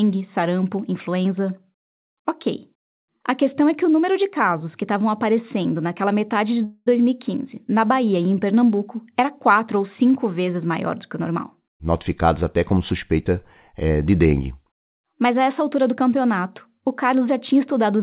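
At 6.64 s, just after "aparecendo naquela metade de", delayed packets likely emptied the jitter buffer. The resulting call audio freeze stretches the last sound into a fading buzz or hiss for about 0.22 s, ending in a brief silence of about 20 ms, before the speech resumes without losing anything. From 17.20 to 18.01 s, after "altura do campeonato o", the jitter buffer speed-up trims about 70 ms of excess buffered audio in small pitch-period cuts. The speech runs about 7% faster at an unchanged pitch and sounds rushed, within the narrowband call sound that stops at 4 kHz.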